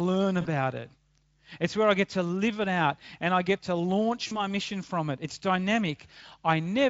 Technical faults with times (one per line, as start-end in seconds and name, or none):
0.41-0.49 VoIP packet loss concealed by the speech codec
4.27-4.45 VoIP packet loss concealed by the speech codec